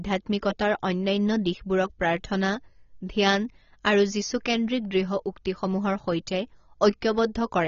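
Throughout, the speech sounds dull and smeared, with nothing above 7 kHz and fizzy sibilants. That's likely AAC compression squeezed to a bitrate around 24 kbps.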